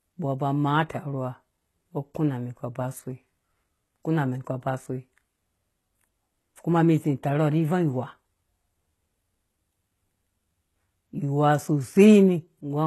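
A speech recording that has most likely passed through HE-AAC compression at a very low rate, consistent with roughly 16 kbps, for its whole length. The encoder keeps only the lower spectrum and synthesises the treble by copying lower bands upward under a coarse envelope, so the top end sounds bright but artificial, with nothing above 12.3 kHz. The mismatched upper harmonics give s sounds a plainly audible gritty, metallic or lispy edge.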